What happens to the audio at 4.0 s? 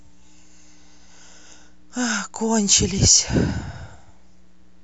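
At 4.0 s the speech sits over a steady mains buzz, which runs unchanged from the start of the clip to the end. Sharp switching spikes arrive twice per 60 Hz cycle, so the interference carries a dense comb of 60 Hz harmonics reaching several kHz. That is what makes it raspy and edgy rather than a smooth, low hum. It stays far beneath the speech, roughly 40 dB down.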